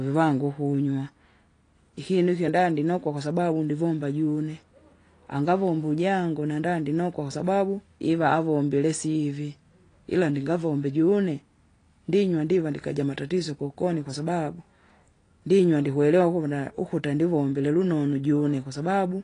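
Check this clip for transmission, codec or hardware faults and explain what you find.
There's one fault, running the whole way through: AAC compression, likely AAC-LC at a low rate, something around 32 kbps. Nothing comes through above about 10.1 kHz, and the encoder's coarse quantising leaves the speech dull, smeared and warbly, with fizzy sibilants.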